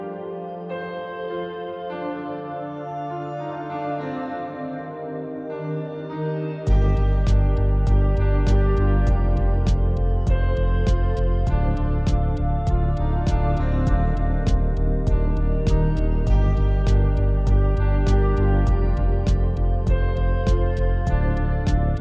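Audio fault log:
No audible faults detected.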